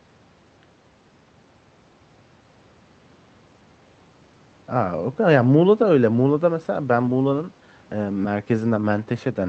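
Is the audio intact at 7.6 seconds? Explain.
Yes, the audio is intact at 7.6 seconds, with nothing there beyond the ordinary coding character of the call path it passed through.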